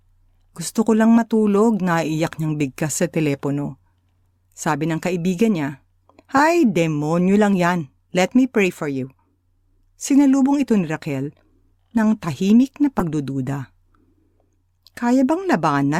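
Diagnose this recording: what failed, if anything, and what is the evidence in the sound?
Corrupt frame decoded at 6.37–6.40 s, after "ng kaibigan niya", and at 12.99–13.02 s, after "ng tahimik na". At the codec stage, damaged frames were decoded anyway, producing loud bursts of misplaced energy peaking around -5 dBFS.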